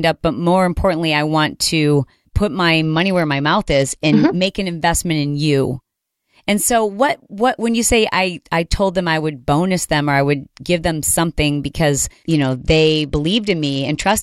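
From 2.83 to 4.46 s, after "want to put my", and from 12.24 s to the end, after "give them something because", the speech turns dull and gritty. This is a Bluetooth SBC bit pool drop, consistent with a fall from bit pool 31 to 11.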